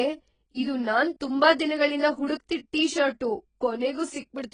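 From start to finish the speech is dull and smeared, with heavy damage that sounds like AAC compression, likely AAC-LC running at a very low bitrate, roughly 18 kbps. Nothing is left above about 10.1 kHz, so sibilants turn into a fizzy, watery hiss, and the vowels warble. On a spectrogram the energy stops at a hard ceiling near 10.1 kHz, and the bands beneath it show blocky gaps and patchy, noise-filled areas.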